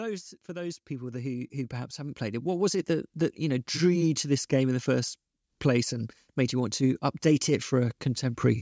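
Automatic gain rising runs from 0.46 to 4.39 s, ending just before "game in the first". The gain control judged the input too quiet and lifted it by about 13 dB over nearly four seconds, so the voice and the background noise swell upward together.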